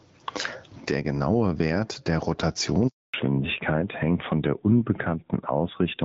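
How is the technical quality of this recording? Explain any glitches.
The technical quality is poor. The speech has three problems: level pumping throughout, a dropout just before the halfway point, and a loss of high frequencies for the rest of the clip. Before the dropout the call runs on the AMR wideband (HD Voice) codec at 12.65 kbit/s, with only light coding damage.

Gain pumping runs through the whole clip. The level swings by roughly 25 dB, and the speech sounds squashed. The likely cause is input gain set far too high, with a fast limiter clamping it on every peak.

A handover gap runs from 2.88 to 3.14 s. The speech fades out within a few tens of milliseconds and stays silent for about 260 ms. This fits the call switching networks while no speech frames arrive, so that stretch is lost.

A fallback to narrowband follows from 3.14 s to the end. The speech suddenly turns duller and rougher, and nothing remains above 4 kHz. 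The call has dropped from AMR-WB at 12.65 kbit/s to AMR-NB at 7.4 kbit/s, and the narrowband codec cannot carry the upper band.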